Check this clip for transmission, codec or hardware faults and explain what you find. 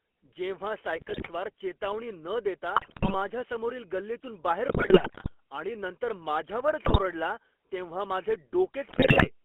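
Three faults are present in this speech clip: GSM full-rate coding and sample clock jitter throughout, plus five bursts of GSM bit errors.

GSM full-rate codec, throughout: the speech sounds like a 13 kbps GSM full-rate codec on a 250 Hz to 3.4 kHz line. The codec models the vocal tract and drives it with a sparse, regularly spaced pulse excitation, which produces the plainly audible buzzy, gravelly roughness.

Sample clock jitter, throughout: a hiss or grain follows the speech, growing on loud and high-frequency sounds and dropping away in pauses. Timing wobble on the order of a microsecond makes the error largest where the waveform changes fastest, here roughly 45 dB below the signal.

GSM bit errors, at 0.96 to 1.30 s (just before "चेतावणी न देता"), 2.76 to 3.15 s, 4.68 to 5.34 s (between "समोरील गल्लीतून बाहेर" and "आणि नंतर"), 6.84 to 7.00 s, and 8.90 to 9.29 s (after "तेव्हा माझे"): corrupted filter, pitch and gain parameters reach the decoder. 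This distorts the spectrum and level frame by frame, and the speech breaks into squawks, pops and gargling.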